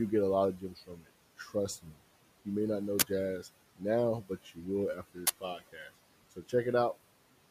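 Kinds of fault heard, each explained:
Noise suppressor artifacts: The suppressor treats the steady room noise as something to remove and pulls it down by about 18 dB, frame by frame. The background sinks in the gaps and swells back under the speech.
Speech cut by the noise suppressor: In five spots the suppressor mistakes bits of speech for noise and ducks them with the background: 0.56 to 1.09 s, 1.38 to 1.55 s, 1.78 to 2.0 s, 4.22 to 4.66 s and 5.41 to 5.91 s. Drops reach about 18 dB, so those parts sound swallowed.
Uninitialised buffer: Two short, loud bursts of digital noise, at 3.00 s and 5.27 s, each lasting about 23 ms. A block got played before any audio was written into it, so leftover memory came out as sound. The length fits a 1024-sample block.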